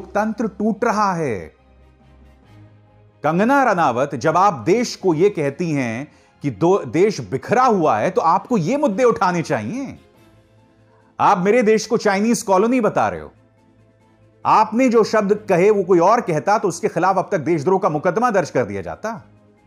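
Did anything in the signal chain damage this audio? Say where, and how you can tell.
No, I hear no damage anywhere in the chain.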